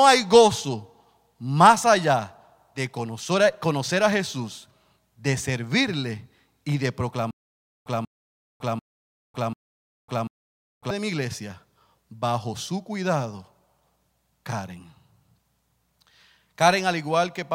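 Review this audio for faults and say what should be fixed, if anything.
There's a stutter with silent gaps from 7.31 to 10.91 s, just after "de servirle y de". A 189 ms burst repeats four times, each followed by 552 ms of dead silence, before "de mi iglesia bajo" picks up. That's likely a stalled stream replaying its last fragment on each retry, so the audio in between is simply gone. A bigger playback buffer or a steadier connection should keep it from running dry.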